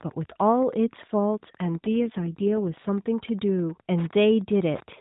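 A faint ticking runs under the speech from start to finish. It is Wi-Fi interference. A nearby Wi-Fi radio sends a beacon every 102.4 ms, and the audio circuit rectifies it into sound. The result is a steady tick close to ten times a second. It sits roughly 30 dB below the speech. It is quiet but constant.

From 1.76 s to 2.90 s the speech turns rougher and more synthetic. This is an AMR rate drop. The mobile link weakened, so the network told the codec to spend fewer bits on the voice and more on error protection. The sound fits a step down from 12.2 kbps to about 5.9 kbps. The band stays the same and nothing drops out. The voice takes on a buzzy, coarse edge. It clears again once the rate returns to the AMR narrowband level heard elsewhere in the clip.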